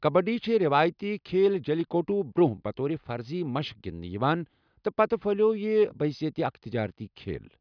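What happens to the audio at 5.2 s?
At 5.2 s the speech carries on cleanly, with no audible fault at that moment.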